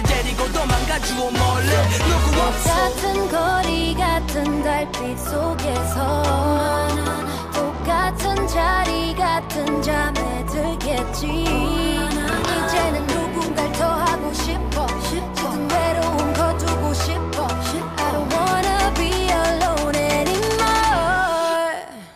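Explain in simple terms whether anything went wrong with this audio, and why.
Nothing went wrong here: no faults can be heard anywhere in this audio.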